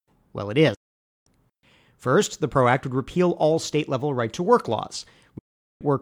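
At 0.74 s the speech drops out to silence through a fast fade of about 8 ms, staying gone until 1.27 s, roughly half a second lost. That's a digital broadcast dropout: the receiver stopped getting good frames and muted, so that stretch of programme never arrives. It happens again from 5.38 to 5.82 s, about 0.4 s of sound missing.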